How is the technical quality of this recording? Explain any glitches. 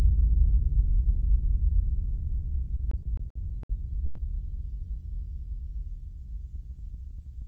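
The recording of everyday sound has two timing glitches. It passes through a call codec path whose high end stops at about 8 kHz, consistent with Opus.

Repeated stalls (stutter), 2.77 to 4.19 s: packets arrived late, so the jitter buffer ran dry seven times. Each time the receiver stretched the last sound to cover the gap, fading it on the longer waits, the longest being 120 ms. About 320 ms was filled this way, roughly 23% of that stretch. Nothing is lost, but the sound drags and stutters.

Jitter buffer speed-up, 6.56 to 7.42 s: the buffer had built up more audio than it wanted. To shed the excess, the receiver trimmed many tiny pitch-period slices in a row, removing about 40 ms in total. Playback runs at 104% speed with unchanged pitch, so the closing sounds run only slightly fast, just short of sounding hurried.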